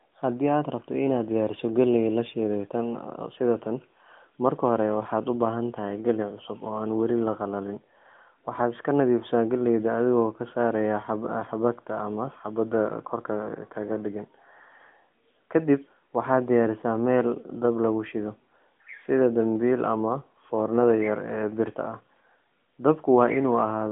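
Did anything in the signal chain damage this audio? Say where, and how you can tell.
No, nothing in the chain damaged this audio.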